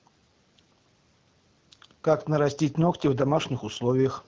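No technical faults can be heard in the speech, which has come through the AMR wideband (HD Voice) codec at 12.65 kbit/s, a rate at which the coding leaves only light traces on the sound.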